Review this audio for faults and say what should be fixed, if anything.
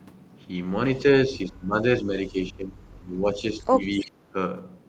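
Speech suppressed in double talk: from 1.27 to 1.84 s and again from 2.0 to 4.36 s the speech dips, losing about 15 dB at worst and then about 20 dB, for roughly 0.4 s and then about two seconds in total. This is likely an echo canceller ducking the near talker while the far side also speaks. Better double-talk detection and a less aggressive suppressor would prevent it.

Echo leak: from 3.84 to 4.11 s a faint copy of the speech returns 312 ms late, about 25 dB below the direct sound. This is likely loudspeaker sound the far end's echo canceller failed to remove. Room reverberation trails off smoothly, but this is a distinct delayed repeat. A longer or better-converged echo-canceller filter at the loudspeaker end would prevent it.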